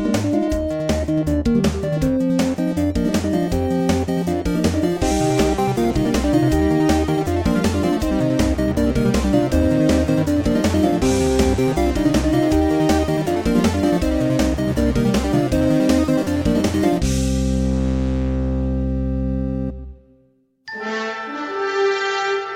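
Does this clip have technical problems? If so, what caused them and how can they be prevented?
No, no technical problems here.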